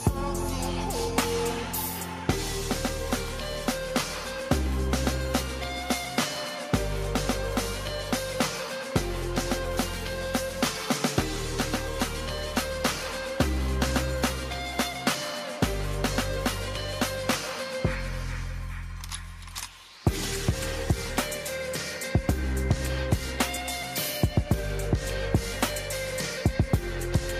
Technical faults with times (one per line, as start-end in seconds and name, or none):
none